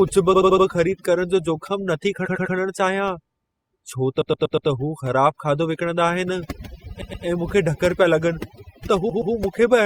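From start to finish, overdone noise removal is at work: a noise reduction stage set far too aggressively pushes individual frequency bands down or out whenever they sit near its noise estimate, taking the softer parts of the speech with them. The background drops and breaks up, dotted with twinkling, chirpy specks.

Over this, five bursts of repeated frames occur, where the same short stretch of compressed audio reached the decoder more than once and was played back again, giving a stutter. At 0.33 to 0.65 s an 80 ms block plays four extra times, adding 320 ms. At 2.25 to 2.55 s a 100 ms block repeats three extra times, adding 300 ms. At 4.21 to 4.69 s a 120 ms block repeats four extra times, adding 480 ms. At 7.01 to 7.25 s and again at 9.09 to 9.33 s a 120 ms block plays twice more, each adding 240 ms.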